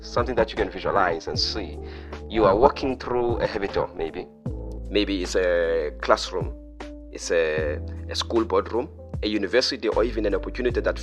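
From the start to 4.78 s, the audio carries overlap-add ripple. It was split into windowed frames and rejoined with an overlap whose gains don't sum evenly, so the level dips by about 11 dB once per frame, around 400 times a second. That rate is too fast to hear as a pulse, so it comes across as a metallic buzz with extra tones around each note. Unlike a musical tremolo, it is rigidly periodic at the frame rate, and unlike comb-filter phasing it does not sweep through the spectrum.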